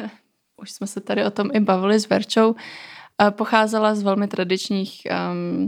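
No technical faults are audible.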